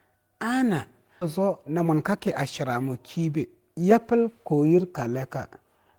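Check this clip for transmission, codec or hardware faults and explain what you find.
Two transmission faults are in this speech clip: a jump past dropped audio, and the receiver's jitter buffer working off a backlog.

Skip ahead, 1.21 to 1.23 s: playback jumps forward with no gap or fill. Around 0.7 s of speech was dropped, either lost on the way or discarded when the buffer overflowed, and the two sides of the cut are butted straight together, so the speech lurches abruptly.

Jitter buffer speed-up, 1.39 to 4.53 s: the buffer still held more audio than it wanted, so it trimmed out lots of tiny pitch-period-sized pieces back to back. That adds up to about a third of a second removed. The speech runs at roughly 108% speed with the pitch unchanged, which comes across as hurried.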